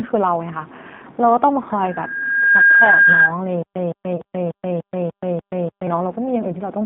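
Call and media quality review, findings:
G.729 codec throughout: band limited to roughly 150 Hz–3.7 kHz, rough, synthetic speech texture from 8 kbit/s pulse-and-filter reconstruction, plainly audible across the whole clip.

Stutter with silent gaps, 3.62–5.87 s: a 165 ms burst replays seven times, each followed by 129 ms digital silence, 294 ms period. Likely a stalled player or stream re-serving its last fragment.

VoIP packet loss concealed by the speech codec, 4.16–4.22 s: 30 ms dropout, consistent with three lost 10 ms frames, filled with decaying extrapolation of the previous pitch and filter.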